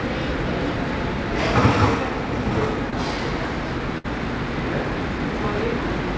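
The clip is everyday sound carried over a call link, with nothing above 8 kHz, which fits a G.722 codec. At 2.90 to 2.94 s there is short concealed packet loss. About 20 ms of audio never arrived in time. The receiver extended the last sound to fill the hole, then blended back. It comes across as a brief smear or wobble. At 3.98 to 4.06 s a burst of packet loss occurs. Roughly 60 ms went missing. The receiver continued the last sound and faded it out. You hear a short held buzz or fading hiss. Then the audio resumes further on, with that stretch gone.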